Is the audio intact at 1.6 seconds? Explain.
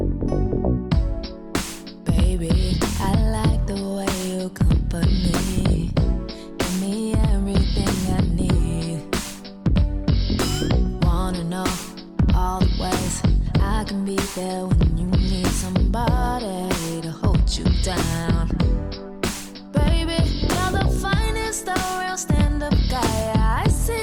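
Yes, at 1.6 seconds the audio is intact, with nothing there to disturb it.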